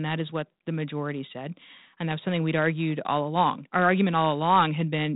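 No technical faults are audible.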